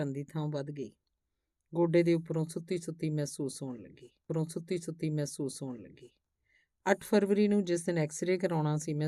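At 4.28 s the speech jumps back and plays a stretch again, running through to 6.28 s. That's a stream segment repeated: the player fetched or queued the same chunk of the programme twice, so two seconds of speech get replayed before things carry on. You'll hear a small blip right at the jump back where the join isn't clean, then the same material again, which makes the clip run two seconds longer than it should.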